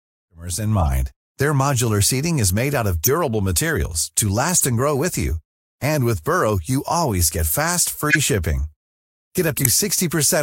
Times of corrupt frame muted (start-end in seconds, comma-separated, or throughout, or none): 5.82